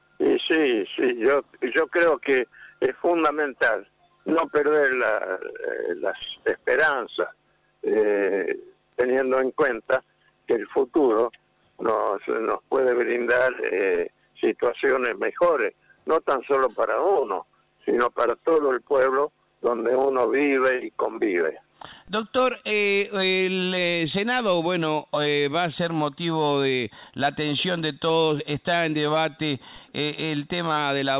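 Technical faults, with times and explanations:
No technical faults are audible anywhere in this recording.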